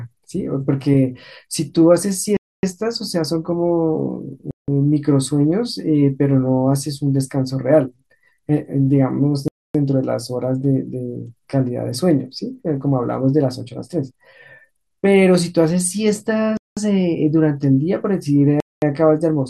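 A likely Bluetooth stall, with the headphone buffer running dry while delayed packets were resent, cuts this speech to silence five times: 2.37 s (0.26 s), 4.51 s (0.17 s), 9.48 s (0.27 s), 16.57 s (0.20 s) and 18.60 s (0.22 s), each time resuming abruptly afterward.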